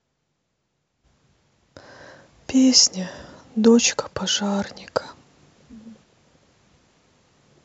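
Nothing stood out as a technical fault on listening to this speech recording.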